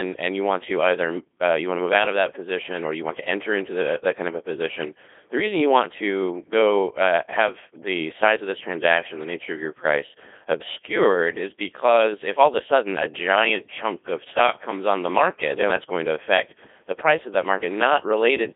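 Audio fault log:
Throughout, Codec 2 vocoder: the speech is heavily damaged, robotic and buzzy, band-limited to 300 Hz–3.6 kHz with nothing above 3.8 kHz. The decoder resynthesises it from sine waves using only pitch, voicing, energy and envelope, discarding the waveform, which fits a 2.4 kbit/s rate.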